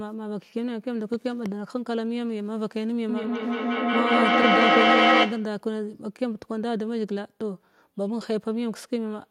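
From 3.09 s to 5.66 s the speech starts coming back on itself at a steady interval of about a fifth of a second. Each return is thinner and more metallic than the last, and instead of fading the repeats stack up until they peak about 8 dB above the speech itself. This is feedback echo between two devices: a second device in the room replays the first microphone's signal, which that microphone captures again, beyond the reach of either echo canceller.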